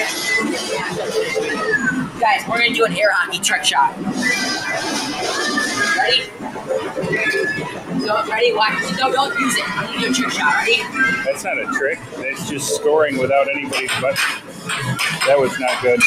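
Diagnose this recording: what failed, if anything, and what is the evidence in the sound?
A speech-oriented noise suppressor in the call-processing stage was left active on non-speech audio. It treats steady tones, ambience and decaying tails as noise and pulls them down while letting onsets pass. Throughout the recording, the level swings by around 10 dB as the suppressor engages and releases. Sustained material sinks behind each attack, so the sound pumps and thins instead of holding a stable level and natural decay.

The same noise suppressor cuts specific passages harder, with the deepest drop at about 9 dB. This happens at 6.25–6.99 s, 7.61–7.93 s, 11.95–12.44 s and 14.38–14.67 s. Each cut lasts roughly a third to three-quarters of a second. In each span the held or fading part of the sound sinks, which is the signature of a gain mask classifying the steady energy as background.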